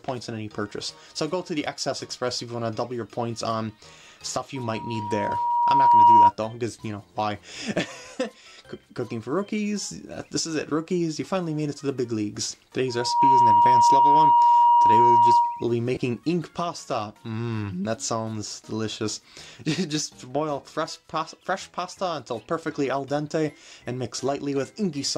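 From 4.55 to 6.32 s and again from 12.88 to 15.75 s, loudspeaker feedback squeal: a 951 Hz tone rising above the sound as the mic-to-speaker loop exceeds unity gain. Unlike a steady interfering tone, it swells by itself, slowly first, then within about half a second, peaking roughly 15 and 10 dB above the audio.

At 15.95 to 15.97 s, lost LE Audio frames. About 20 ms goes missing, which fits two 10 ms LC3 frames, and the decoder repeats the last spectrum with random signs. That produces a brief noisy smear rather than the clean silence of a plain dropout.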